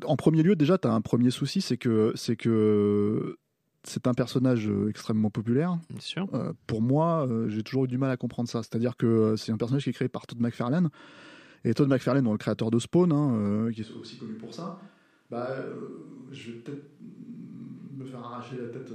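At 13.86 s, just after "hein qui", the voice turns hollow and roomy, loses bass, drops about 10 dB, and gains faint background noise. This is likely a switch to a distant microphone.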